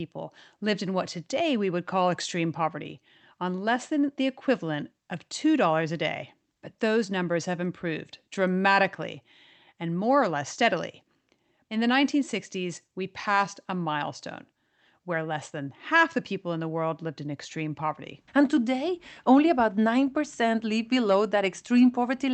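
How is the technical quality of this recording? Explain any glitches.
No glitches or technical faults can be heard anywhere here.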